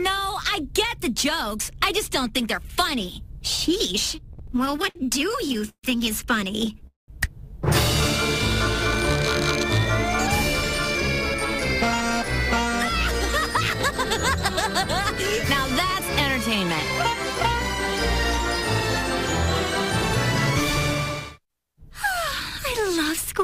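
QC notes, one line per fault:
4.33–6.83 s, repeated stalls (stutter): about 20 short gaps, the longest 142 ms, add roughly 375 ms in all, about 15% of the span. Packets arrived late, the jitter buffer repeatedly ran dry, and the receiver stretched the last sound each time, so the audio drags and stutters.
6.87–7.10 s, call audio freeze: a 209 ms hold in which the last sound is extended briefly and then falls to about 150 ms of silence before playback resumes where it left off. This likely comes from delayed packets emptying the jitter buffer.
13.47–17.36 s and 21.16 s to the end, jitter buffer speed-up: playback runs 1% fast in the first span, dropping around 50 ms, and 4% fast in the second, dropping around 100 ms. The receiver cut short pitch-period pieces to shrink an overfilled buffer, so pitch holds while the pace runs slightly faster.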